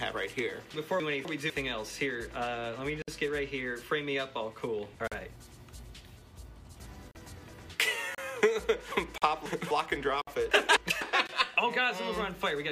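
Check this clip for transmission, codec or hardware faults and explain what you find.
Two transmission faults are present. The sound is jumbled in three places, and short silent holes break it seven times.

Chunks out of order at 1.0–1.5 s, 8.92–9.71 s and 10.51–11.01 s. A 250 ms block arrives one or two blocks late and plays after material that should follow it. The result is a scrambled moment with hard joins.

Gaps between stream segments at 3.02 s (57 ms), 5.08 s (42 ms), 7.11 s (36 ms), 8.15 s (32 ms), 9.18 s (41 ms), 10.22 s (57 ms) and 11.27 s (19 ms). Segment timestamps leave holes at the one-second boundaries, which are filled with silence. Each is a sharp-edged dropout.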